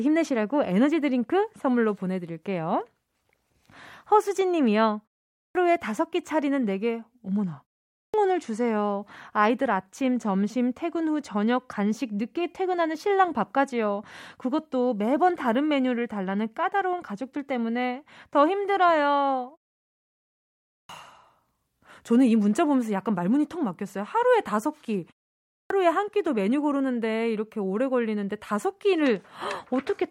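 Clipped start after a pause at 5.43, 8.02, 20.78 and 25.59 s: the output device sleeps through each silence and needs 110 to 120 ms to wake, so speech bursts in abruptly without its opening sounds.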